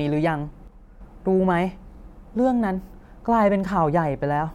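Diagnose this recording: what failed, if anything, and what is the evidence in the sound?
From 0.68 to 1.01 s the speech abruptly drops about 6 dB in level, then snaps back. The cause is likely one channel dropping out in the analogue wiring: with one stereo side lost for that third of a second, the mono sum keeps only half the shared signal.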